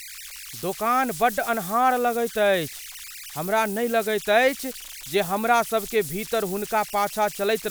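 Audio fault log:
Throughout, converter idle tones: a whistle around 2 kHz sits in the pauses between phrases and turns to grainy hiss under the quiet ends of speech, at about 15 dB below the signal. An undithered delta-sigma converter locks into repeating bit patterns when the input is small, and those cycles produce tones. On a spectrogram this appears as a thin horizontal line near 2 kHz through the gaps; the waveform shows low-level fuzz where it should be flat.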